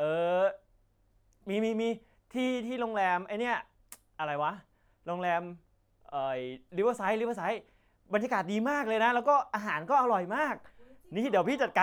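Nothing goes wrong anywhere in this stretch of speech, so there's simply no fault to point to at any moment.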